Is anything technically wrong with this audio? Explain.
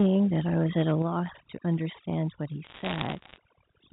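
Yes. Four kinds of fault can be heard in this speech.

Overdone noise removal runs throughout. Frequency bands near the noise floor are pushed down too hard. The background twinkles.

Microphone overload distorts 0.0 to 0.16 s and 0.56 to 0.94 s. Peaks sit about 3 to 4 dB past the converter's limit. Tops are likely clipped at the converter, giving a harsh crackle.

The microphone volume is stepped down at 1.02 s. The level drops by about 6 dB in one step. Software likely lowered the input gain after those clipped peaks.

Bit errors on a digital phone line crackle from 2.64 to 3.38 s. Flipped bits corrupt single samples, at a bit error rate around one percent. Hits on high bits or on the sign of loud samples make sharp ticks over the speech.

The G.711 telephone coding's limit at 4 kHz is audible as a narrow, phone-like band.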